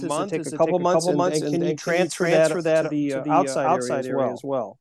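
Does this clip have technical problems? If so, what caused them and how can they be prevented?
Yes. Throughout the speech, everything is heard twice. A dry, full-band repeat arrives about 300 ms behind, at roughly the same loudness, with no reverb tail, so each syllable smears into a stuttering echo. This is a doubled audio track, likely from the signal being captured a second time through a slower path. Prevent it by routing each source through only one capture path, or by muting the duplicate feed in the mix.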